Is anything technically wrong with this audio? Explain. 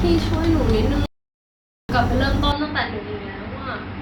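Yes. This speech clip has two faults.

At 1.06 s a playback stall cuts the sound off. It stays silent for about 0.83 s, until 1.89 s. The player likely ran short of data or was blocked. The output then resumes.

From 2.52 s to the end, the input switched to a poorer device. There is no gap at the change. The sound turns dull, with a narrower band. It drops about 10 dB. A new noise floor sits roughly 35 dB below the speech. A different microphone or headset profile is the likely cause.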